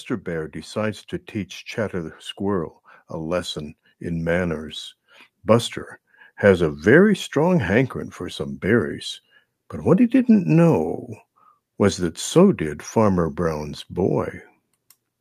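From 0.24 to 6.88 s, automatic gain rising lifts the level by about 9 dB as the gain control compensates for quiet input. Speech and background swell together before "strong hankering for some". The waveform envelope widens steadily, and the spectrogram's noise floor brightens alongside the speech.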